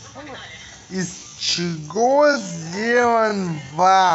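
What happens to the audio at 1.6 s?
You're in a time-stretched section from 1.15 s to the end. Speech drops to half pace, likely through repeated short chunks, so it drags with the pitch unchanged.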